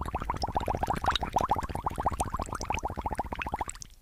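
A short recording of sounds has chunks out of order at 2.66 to 2.70 s: one 20 ms chunk plays a chunk late, leaving a jumbled blip with waveform discontinuities at the joins.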